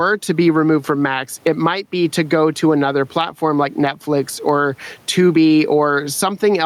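Gain pumping runs through the whole speech clip, likely from gain set far too high with a fast limiter clamping down. The room noise sits about 41 dB below the speech, and the gain swings by roughly 15 dB. Unlike a noise gate, the background never cuts out.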